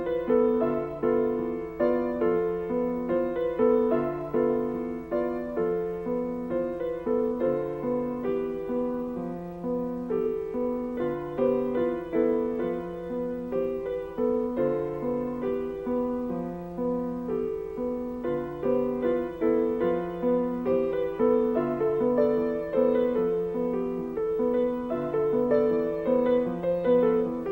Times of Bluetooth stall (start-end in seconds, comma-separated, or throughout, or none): none